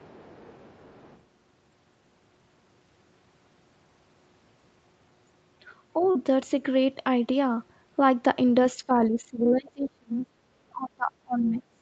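From 0 to 1.22 s, a second, faint voice sits well below the speech. This is the other side's voice leaking through. It is likely loudspeaker sound that reached the microphone and was not fully removed by the echo canceller. It comes through quiet.

At 6.11 to 6.17 s there is a short concealed packet loss. About 40 ms of audio never arrived in time. The receiver filled roughly 35 ms by extending the preceding sound, then blended back. It is heard as a brief smear.

From 8.77 to 10.27 s, and again from 10.71 s to the end, the speech drops deeply, losing much of its level in places. This is speech suppressed in double talk. It is likely that both sides spoke at once and the echo canceller turned everything down.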